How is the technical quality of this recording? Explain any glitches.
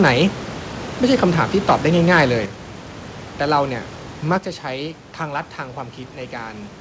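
The recording has two technical problems: a stretch of harsh distortion and two sudden drops in level.

Microphone overload, 1.69 to 2.23 s: the input was likely set too high, pushing peaks about 6 dB past the converter's maximum so their tops were sliced flat. Only a few percent of samples are affected, but they fall on the loudest syllables, which take on a gritty, crackling edge instead of rounding off cleanly. The 8 kHz ceiling of the G.722 call path trims the top of the rasp.

Microphone volume stepped down, at 2.46 s and again at 4.38 s: each time the level falls abruptly by about 6 dB. The first step comes just after the distorted stretch, so it is likely the call software reacting to the overload by lowering the device's input volume in a single jump. Because the change happens at the microphone, the speech and the room noise drop together.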